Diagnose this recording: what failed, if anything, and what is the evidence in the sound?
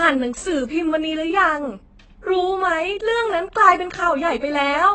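The codec stage failed throughout the speech. Nothing sits above 8.3 kHz, and heavy damage leaves the sound dull and smeared, with a warbling, fizzy edge on sibilants. The likely cause is AAC compression (AAC-LC) at about 16 kbps, where the encoder lowers the cut-off and starves the spectrum.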